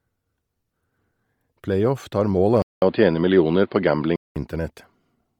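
Bluetooth LC3 compression throughout: the speech carries a grainy, breathy edge, likely LC3 near 32 kbps replacing much of the upper band with noise.

Input switched to a poorer device, 2.62 to 4.36 s: a 200 ms gap, then duller sound cut above 4.9 kHz, faintly noisier and shifted in level, likely another microphone.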